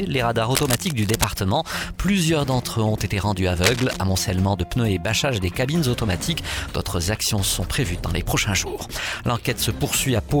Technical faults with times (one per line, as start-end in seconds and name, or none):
0.49-1.24 cable scratch noise
3.62-3.99 cable scratch noise